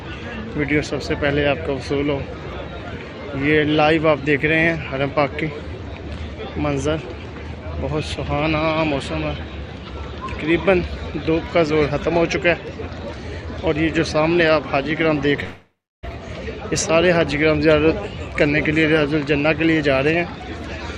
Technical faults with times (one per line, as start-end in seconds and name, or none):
15.43-16.05 long network dropout